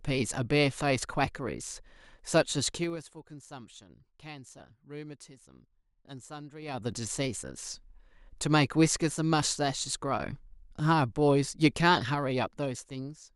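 Speech with zipper noise, heard three times when the level moves in coarse 3 dB steps with no smoothing between them. From 2.69 to 3.07 s it drops about 20 dB, ticking at around fifteen steps a second. From 6.60 to 6.97 s it comes back up by about the same amount at a similar rate. From 11.98 to 13.28 s it drops about 10 dB more slowly, around three clicks a second.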